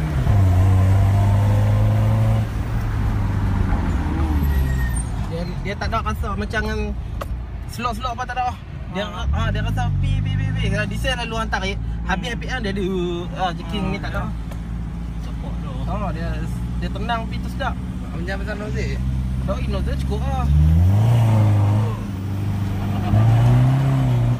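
No technical faults are audible anywhere in the audio.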